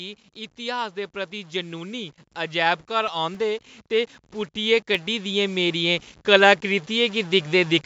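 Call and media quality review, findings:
Stuck bit, whole clip: grainy noise or buzzy distortion on speech, and pauses filled with hiss rather than silence. Likely one converter or data-line bit held at a fixed value, shifting about half the samples by that bit's weight. Unlike clipping, it is present at low levels too, and the noise in gaps follows the sign of the quiet signal.

Automatic gain rising, 0.55 to 7.81 s: overall level climbs by about 15 dB. The speech and the background noise floor swell together. The AGC read the input as too quiet and kept raising its gain. Unlike a fade-in or someone moving closer, the ambience rises as much as the speech, and the rise is slow and continuous over several seconds.

CD scratch ticks, 3.08 to 4.95 s: eight regular ticks or micro-dropouts, about four per second, of uneven strength, the longest roughly 2 ms. A disc blemish passes the pickup once per revolution, beyond what error correction can rebuild, so the player interpolates or mutes those samples. 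Unlike random vinyl or digital clicks, the spacing is even.

The call microphone path limits the band to 8 kHz, with nothing above that.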